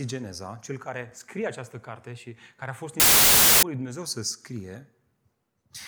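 From 3.00 to 3.63 s the samples are built from the wrong bytes: the low bits end up on top, so the speech drops into loud, harsh broadband noise.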